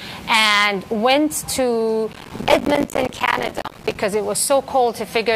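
From 2.13 to 3.95 s a dense, gritty crackle tears through the sound, then stops. This is processor overload crackle: the processor kept missing its deadlines for short buffers of around 5 ms, roughly two hundred times, each miss dropping in a hard-edged gap of silence.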